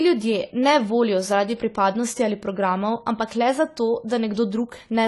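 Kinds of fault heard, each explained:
AAC compression: The speech sounds dull and smeared throughout, with nothing above 11.5 kHz, which points to a likely low-bitrate AAC-LC encode, perhaps around 32 kbps.
Pre-echo: Right after "programov ampak le zato", at 4.08 s, a short hiss of about 19 ms arrives ahead of a sharp attack, softening its onset.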